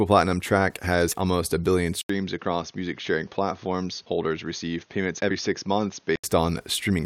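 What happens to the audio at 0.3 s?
Nothing goes wrong at 0.3 s; the speech carries on intact through that moment, with no dropout, click or distortion.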